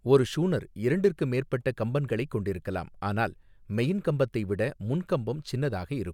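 No technical faults are audible anywhere in the recording.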